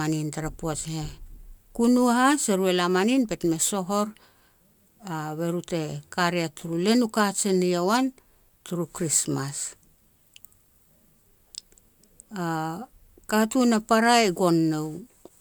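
Nothing stood out as a technical fault anywhere in the speech when listening.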